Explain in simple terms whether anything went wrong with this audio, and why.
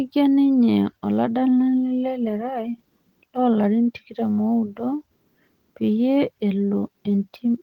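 Nothing went wrong here: the speech comes through steadily with no dropouts, glitches or sudden changes anywhere along the way.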